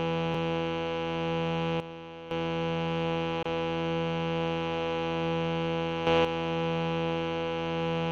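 At 0.34 s there's a click. That's a repeated buffer: fresh audio didn't arrive in time, so the last buffer played once more. The repeat lasts about 1.33 ms, which fits a 64-sample buffer, so it's too short to hear as a stutter.

From 1.80 to 2.31 s there's a sudden gain jump. The sound and the background noise drop together by about 12 dB, with hard edges at both ends. That's likely a digital gain change applied without a ramp.

At 3.43 s a gap of about 27 ms opens at a join of encoded pieces. The sound cuts out, with edges slightly smeared by the codec, then carries on where it stopped. Encoder start delay and last-frame padding were left in at the join.

From 6.07 to 6.25 s there's another sudden gain jump, this time up by about 8 dB. Sound and noise rise together and then snap back down. Again, this is likely an unramped gain step.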